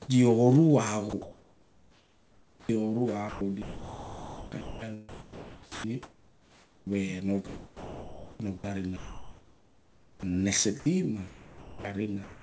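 From 1.10 to 2.69 s, 3.29 to 6.87 s, 7.47 to 10.23 s and 10.80 to 12.43 s the speech turns choppy, with the likely cause being sound chopped by the voice detector. About 1.5, 2.8, 2.3 and 0.8 s respectively give way to comfort noise, so quiet syllables and word edges vanish. Unlike packet-loss dropouts, the gaps hold steady noise rather than silence or smeared repeats. The G.722 call path stops at 8 kHz.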